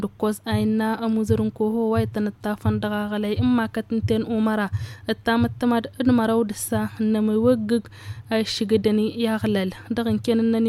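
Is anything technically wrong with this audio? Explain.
No, I can't hear any technical problem in this recording.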